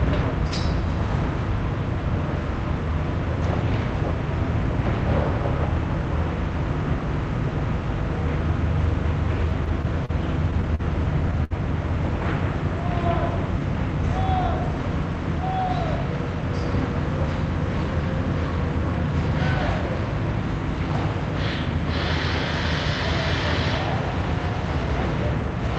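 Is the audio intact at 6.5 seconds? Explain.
Yes, the audio is intact at 6.5 seconds, with nothing there beyond the ordinary band-limited character of the call path it passed through.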